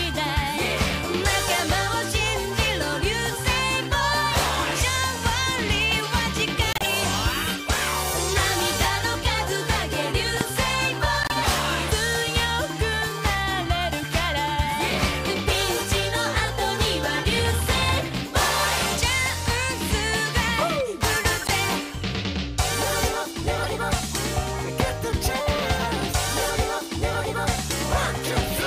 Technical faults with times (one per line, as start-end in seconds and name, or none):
6.71-6.86 corrupt frame decoded
10.41-10.43 loud pop
11.23-11.32 corrupt frame decoded
21.41-21.50 corrupt frame decoded
23.63-23.66 corrupt frame decoded
24.80-24.82 loud pop